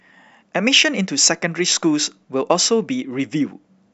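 Speech, with channel delay (comb filtering) from 1.97 s to the end of the clip. Here one channel trails the other by only about a single sample, roughly 0.02 ms, which fits a one-sample offset before the mono sum. With so short a delay, the first cancellation notch sits up around 20 kHz, so there is no obvious phasey hollowness. Instead the top octave is progressively pulled down and the speech turns dull.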